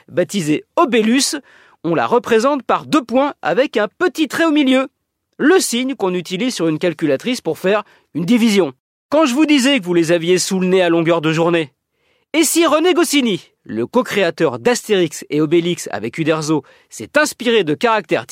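Nothing here sounds out of place; just someone talking, with no technical faults to point to anywhere along the way.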